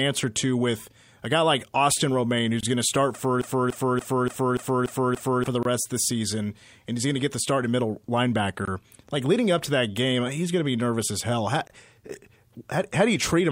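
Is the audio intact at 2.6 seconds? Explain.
No. From 2.61 to 2.63 s there is a gap between chunks: about 23 ms of silence where two chunks were joined, just before "going to start for".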